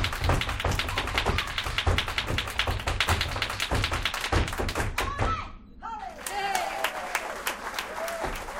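A recording of sounds with two short bursts of damaged data in a compressed stream. The first is a brief blip at 4.19 s. The second runs from 6.63 to 6.65 s. Each comes from a stretch of the compressed data arriving wrong. The decoder cannot read those frames properly. It loses sync and hunts for the next valid frame header. That brief misreading produces the glitch.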